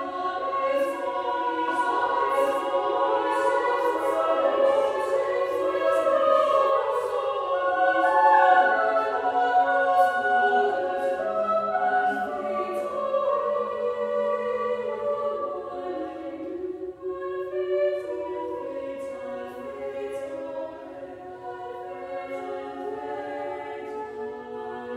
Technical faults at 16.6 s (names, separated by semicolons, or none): none